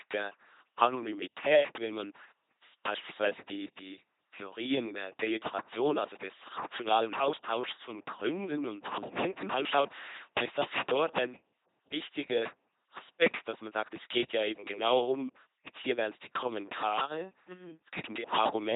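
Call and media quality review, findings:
LPC-10 vocoder, throughout the speech: buzzing, mechanical robotic quality; heavy codec damage. Excitation is either pulse train or noise, a hard voiced/unvoiced switch, driving a ten-pole vocal tract filter at 2.4 kbit/s. Misjudged frames give stray buzz or hiss. No content above 3.8 kHz.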